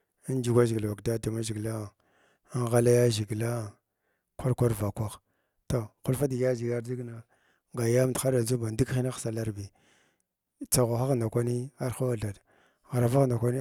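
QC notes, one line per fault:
No technical faults can be heard in the speech signal at any point in the clip.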